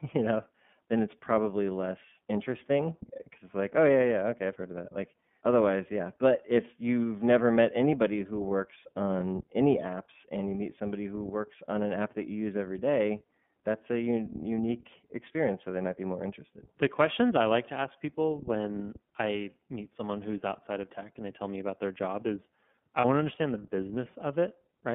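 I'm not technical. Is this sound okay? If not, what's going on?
No. The whole recording has passed through the iLBC codec, a phone-call compression method. It keeps only the range from about 150 Hz to 3.5 kHz, so the voice sounds thin and narrow, and it adds a clearly audible rough, slightly synthetic edge.

There is also a brief dropout from lost iLBC frames at 23.00 to 23.05 s. A piece of the signal went missing, and the decoder filled the hole by repeating the last bit of voice mixed with noise. It sounds like a short buzzy held vowel, which fits one lost 30 ms frame. The voice is clear again immediately afterwards.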